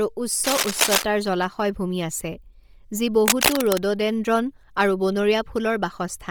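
Speech with a breathy, grainy top end throughout, likely Bluetooth LC3 compression at a low bitrate. Its noise-filled highs sound rough rather than simply muffled, as plain low-pass filtering would. Cable scratch noise, probably from a worn connector being moved, rustles over the speech from 0.44 to 1.03 s at about speech level and from 3.26 to 3.83 s slightly louder. Its dense, uneven texture sets it apart from isolated clicks.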